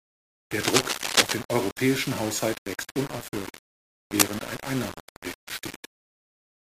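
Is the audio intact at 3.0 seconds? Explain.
No. Throughout the clip, the speech was likely rounded to about 5 bits without dither, so the error tracks the signal, adding grainy distortion only about 10 dB below it.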